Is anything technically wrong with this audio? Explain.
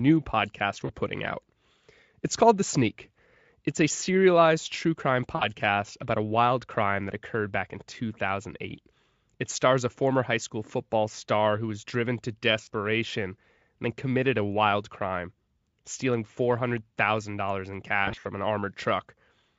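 Yes. There are four short dropouts from VoIP packet loss concealed by the speech codec. They fall at 0.85 to 0.90 s, 5.35 to 5.47 s, 12.63 to 12.67 s and 18.05 to 18.27 s. The first three lose about 40, 60 and 40 ms. The last is a cluster of gaps spread over about 200 ms, the longest 60 ms. During each gap the decoder repeats its last pitch and filter at falling gain. That smears the speech into a brief buzzy tone or coloured noise that fades. The voice stays weak just after each gap. The Speex coding itself adds little or no audible damage.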